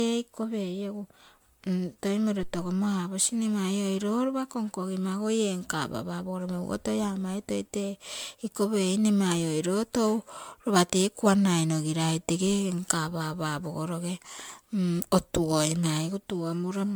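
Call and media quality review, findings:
Generation loss, throughout the speech: swirly, hollow, smeared texture, blurred consonant onsets, band-limited near 19.9 kHz. Likely repeated MP3 transcoding, around ten passes near 133 kbit/s, each requantising on a shifted frame grid so noise and spectral holes accumulate.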